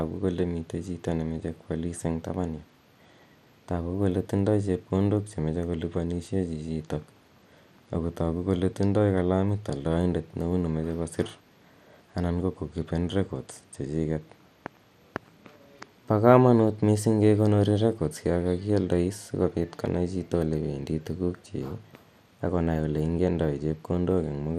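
Throughout the speech, the sound is dull, with nothing above 15 kHz. A gurgling, granular roughness is plainly audible. This is likely MP2 compression. Short of bits, upper sub-bands are switched off and the rest coarsely quantised, which fits an 80 kbps rate.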